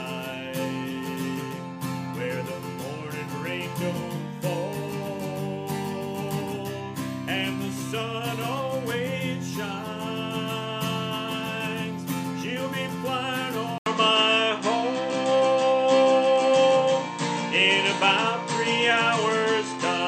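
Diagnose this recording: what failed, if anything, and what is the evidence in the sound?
At 13.78 s the sound drops out for 80 ms, then returns duller and boxier, with nothing above 8.4 kHz, a shift of a few decibels in level and a new, quiet background noise. This is likely an input switched to a poorer device at the driver stage.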